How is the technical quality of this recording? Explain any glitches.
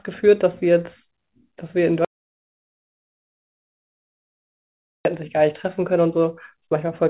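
The recording has one clear glitch: an audio dropout to silence running from 2.05 s to 5.05 s, heard over narrowband call audio with nothing above 4 kHz, consistent with a telephone codec such as G.711. The speech stops abruptly mid-flow and resumes just as suddenly. The three-second gap is silent with no room tone. The likely cause is that the input was briefly lost through a disconnect, link failure or mute while the encoder kept writing silence. Whatever was spoken in that span is not recoverable.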